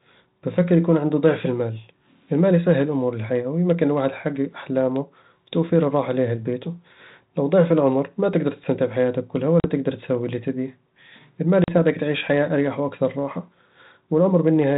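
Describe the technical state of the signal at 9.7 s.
Packet loss on an ADPCM call hits from 9.6 to 9.67 s, between "تقدر تستمتع بحياتك كلها" and "تقدّر تسوي كل اللي". About 40 ms of audio, a couple of packets' worth, drops out and is filled with silence, leaving a hard-edged hole. Because the 32 kbit/s G.726 decoder's adaptive predictor and step size drift out of step with the sender's during the gap, speech resumes slightly distorted, settling within a few tens of milliseconds.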